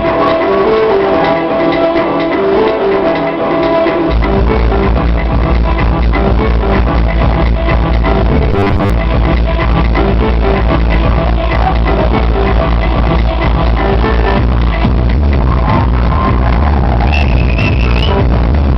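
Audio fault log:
8.52–8.90 s, robotic sound from repeated short buffers. The sound turns into a rigid, metallic buzz fixed at 100 Hz. It still loosely tracks the underlying audio. The likely cause is starved playback looping a 10 ms slice, so most of the real material is skipped.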